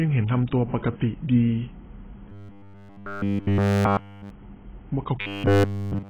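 Heavy low-bitrate coding, likely AAC compression of the AAC-LC kind, runs through the whole speech clip. The encoder had too few bits to spend, so it lowered its cut-off and coarsely quantised what remained. The damage suggests a rate somewhere near 16 kbps. The speech sounds dull and muffled, with a smeared, warbling texture over the vowels and fizzy, blurred sibilants.

From 2.29 to 4.30 s, and again from 5.21 s to the end, new audio stopped arriving in time, most likely a playback buffer underrun. The software filled the gaps by looping the same tiny slice of sound while the real audio was skipped. The result is robotic sound from repeated short buffers. Essentially all of each stretch is made of these repeats, which impose a fixed 100 Hz buzz, consistent with a 10 ms buffer. The speech turns into a rigid, metallic drone that only loosely follows the original.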